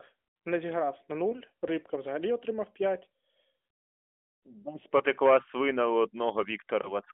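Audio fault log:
1.30–1.40 s, lost AMR speech frames: right after "не зіграв на", one 20 ms frame failed its checksum, so the AMR-NB decoder at 12.2 kbps reused the previous pitch and vocal tract settings at lower gain, heard as a brief dip or warble.
4.98–5.02 s, lost AMR speech frames: one more 20 ms frame was concealed the same way just before "свина у", leaving a short sag in level.
6.82–6.94 s, lost AMR speech frames: a third single lost frame gives another quick dip or warble, with the speech returning weak or rough for a moment.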